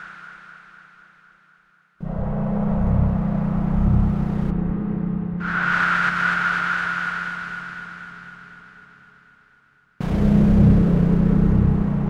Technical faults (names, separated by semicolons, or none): none